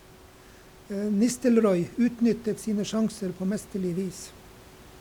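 Nothing stood out on listening to this speech recording, apart from a low room noise sitting about 25 dB below the speech, which belongs to the recording space rather than to any fault in the system.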